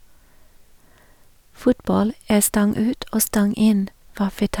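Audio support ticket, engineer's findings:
Nothing stood out on listening to the speech in this recording, so there are no findings to log against this ticket.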